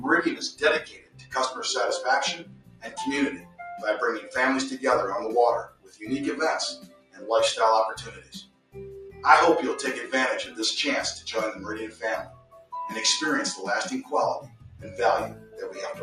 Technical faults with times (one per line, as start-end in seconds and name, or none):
0.00-16.03 noise suppressor applied to music or sounds
0.51-1.34 sound cut by the noise suppressor
2.38-3.60 sound cut by the noise suppressor
5.66-6.04 sound cut by the noise suppressor
6.76-7.28 sound cut by the noise suppressor
8.01-9.24 sound cut by the noise suppressor
11.53-12.72 sound cut by the noise suppressor
14.03-16.03 sound cut by the noise suppressor